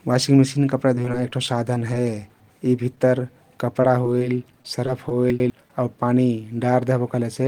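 Repeated packet loss (robotic sound) runs from 0.95 to 2.06 s, just after "वाशिंग मेसिन कपडा". Nine short holes, the longest 16 ms and about 87 ms in all, are each patched by extending the preceding sound, so around 8% of the stretch is synthetic. The speech turns choppy, with fragments missing.

Chunks out of order appear first at 2.3 to 2.5 s. A 100 ms chunk plays one chunk late, after audio that should follow it. Nothing is lost, but the three hard joins make the moment sound jumbled.

A short concealed packet loss at 2.96 s leaves a 10 ms hole. The receiver fills it by continuing the last sound and then blends back into the real signal. The result is a tiny smear or wobble.

Scattered short gaps cover 3.82 to 5.11 s. Roughly seven isolated holes of about 10 ms or less, around 70 ms together, are each filled by continuing the previous sound. The speech stays clear but carries brief hiccups and ticks.

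Chunks out of order return at 5.3 to 5.5 s. Again a 100 ms chunk arrives one chunk late, and the misplaced segment produces a garbled instant at its three hard joins.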